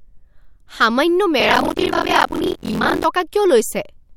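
From 1.39 to 3.06 s the speech takes on a steady robotic rattle at 43.1 Hz, the sign of buffer tearing, which fits a 1024-sample buffer. Writer and reader have slipped, so about half of each period replays audio roughly 50 ms old. Unlike random dropouts, the buzz is periodic and follows the signal.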